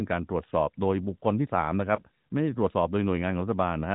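At about 1.96 to 2.01 s a lost AMR speech frame causes a brief dip or warble, consistent with a single 20 ms frame failing its check. The decoder covers the gap by repeating the last good pitch and vocal tract settings at reduced gain. Unlike a packet dropout, the sound never cuts to silence.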